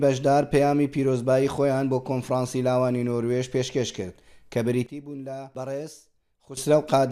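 A sudden gain jump runs from 4.86 s to 6.57 s, where the level drops by about 14 dB in a single step and the background noise falls with it, then returns just as abruptly at the end. Because signal and noise shift together with no fade, the change is likely a digital gain setting or bit shift applied sample to sample without a ramp, rather than anything in the source itself.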